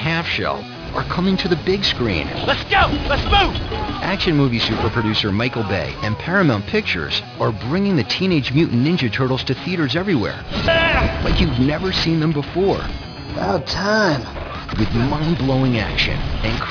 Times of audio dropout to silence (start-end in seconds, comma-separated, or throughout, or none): none